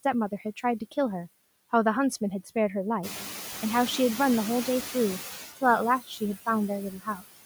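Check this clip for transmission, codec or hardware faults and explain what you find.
The faults in this speech clip come from the noise suppressor rather than from transmission or the codec, and they appear in three forms.

Noise suppressor artifacts run through the whole clip. The suppressor pulls down the bands it treats as steady noise by about 11 dB, frame by frame, so the background dips in the gaps and returns beneath the speech. On a spectrogram the noise floor looks patchy and flickers between frames instead of forming an even haze.

The noise suppressor catching up happens from 3.03 to 3.42 s. At about 3.0 s the room noise jumps by about 15 dB, and the suppressor's estimate takes 390 ms to follow. During that stretch only about 5 dB of the noise is removed, so a brief burst of louder noise comes through and then settles. On the waveform the floor rises abruptly and then tapers down. 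After that the room noise sits about 11 dB under the speech, which is simply the room itself.

Speech cut by the noise suppressor occurs from 6.01 to 6.48 s and from 6.91 to 7.24 s, covering roughly a fifth of a second each time. The suppressor treats quiet speech energy as noise and cuts it by up to about 14 dB and 16 dB, so those sounds come across swallowed and faint. A spectrogram shows dark gaps in the speech energy, and the waveform envelope shows sudden notches.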